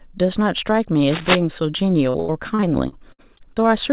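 From 1.1 to 1.36 s a rough scratching burst, about as loud as the speech, sits over the sound; this is likely cable scratch noise from a worn, moving contact.

From 2.1 to 3.68 s the speech turns choppy and robotic, with short holes up to 83 ms patched by repeating sound. This is repeated packet loss on the call path. That path is band-limited to 4 kHz, which fits a G.711 codec.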